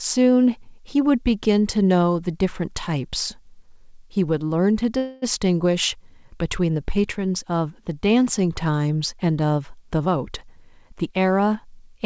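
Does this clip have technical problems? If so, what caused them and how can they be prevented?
Yes. From 4.98 to 5.24 s the sound stalls. The last fragment is drawn out into a fading buzz for about a quarter of a second, then the audio resumes exactly where it stopped. Nothing is lost, but a 241 ms gap has been inserted. This is a call audio freeze, likely caused by packets held up in transit: the jitter buffer ran empty, so the receiver bridged the wait by extending the last sound it had. To prevent it, stabilise the network path, for example by prioritising call traffic or using a wired connection instead of a congested wireless link.

From 9.99 to 11.95 s the audio, band-limited to 8 kHz as expected for the G.722 call codec, sounds hurried. It runs at about 109% speed while the pitch stays the same. This is a jitter buffer speed-up. The buffer was holding more audio than its target, as happens when delayed packets arrive in a burst, so the receiver repeatedly cut out slices one or a few pitch periods long. 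In total it removed roughly a fifth of a second to bring the delay back down. Steadier packet delivery prevents this, because a buffer that never overfills has no need to shed audio.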